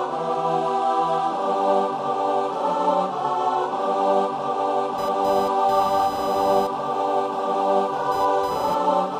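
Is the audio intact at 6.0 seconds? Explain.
No. From 4.98 s to the end of the clip, computer activity noise sits under the sound, pulsing at around 1 kHz and roughly 20 dB below the signal. Shifting processor, graphics or mouse load disturbs the ground shared with the audio circuit, giving a buzzing, chirping or scratching that rises and falls with the computer's activity, not the sound. Mains hum, by contrast, stays steady at a fixed low pitch.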